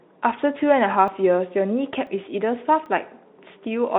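At 1.08 s, 2.07 s and 2.86 s the speech jumps abruptly, skipping roughly 10 ms, 10 ms and 30 ms with no gap. This is likely a dropped buffer (overrun), where unread samples were overwritten and the surrounding audio spliced together.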